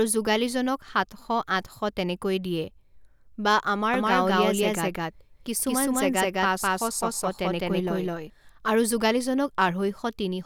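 From 3.94 s to 8.30 s the speech carries a doubled audio track: a second, full-band copy trails by around a fifth of a second at roughly equal level, with no decay or room colour, and cuts in and out abruptly, likely from a duplicated capture path.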